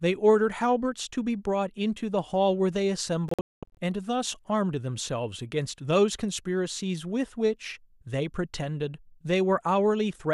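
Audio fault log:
3.29–3.78 s digital broadcast dropout: the receiver muted failed frames, leaving 360 ms of silent holes, the longest 216 ms. The waveform goes flat and the spectrogram shows blank vertical gaps.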